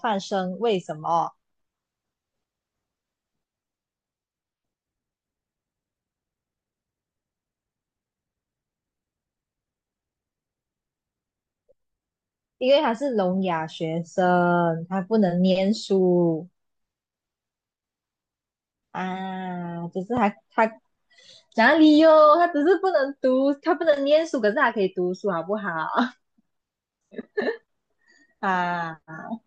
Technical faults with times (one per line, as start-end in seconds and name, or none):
none